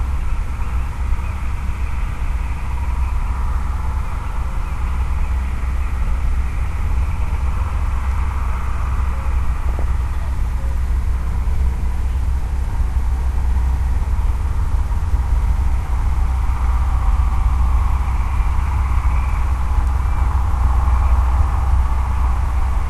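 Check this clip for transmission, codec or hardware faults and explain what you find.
Two faults are audible: lossy coding damage through the whole clip, and one short burst of DAB burbling.

MP2 compression runs from start to end. The audio sounds dull and grainy, with a gurgling edge. The likely cause is MPEG Layer II coding at a low rate, roughly 80 kbps. Upper sub-bands drop out and the remaining bands are coarsely quantised.

DAB burbling occurs from 9.69 to 9.82 s. Bit errors slipped past error correction, a few per thousand bits. Corrupted samples put short blips of noise into single sub-bands across 7 frames. It sounds like a brief burst of noise blips.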